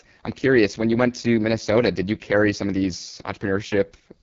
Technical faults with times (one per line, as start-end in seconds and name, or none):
0.00-4.22 AMR wideband (HD Voice) codec